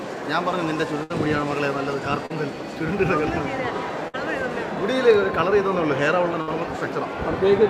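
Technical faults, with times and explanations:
1.03–1.12 s, burst of packet loss: the preceding sound is held and fades for about 64 ms, then resumes with roughly 60 ms of audio skipped after packets went missing.
2.26–2.32 s, short concealed packet loss: a brief smear where about 40 ms never arrived in time, so the decoder extended the last sound and blended back.
4.08–4.16 s, burst of packet loss: a held, fading continuation lasting about 59 ms covers lost packets, and the audio jumps ahead, with about 60 ms gone.
6.42–6.49 s, burst of packet loss: the last sound is stretched and faded for about 58 ms, then playback resumes after a missing stretch of about 60 ms.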